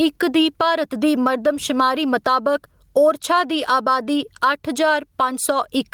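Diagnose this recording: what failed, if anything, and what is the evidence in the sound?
The input gain was likely set far too high, forcing a fast limiter in the capture or call-processing stage to clamp down on every loud syllable. Throughout the speech, the gain swings by around 10 dB, giving audible gain pumping and a squashed, flattened dynamic range.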